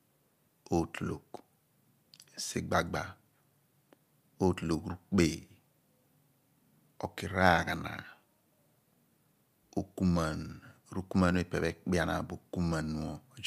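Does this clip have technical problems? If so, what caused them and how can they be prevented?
No, the speech signal shows no technical problems, so there is nothing here that needs preventing.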